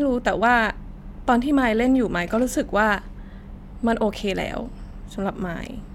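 Nothing technically wrong turns up anywhere in this bit of recorded speech, so there's no fault to flag or explain here.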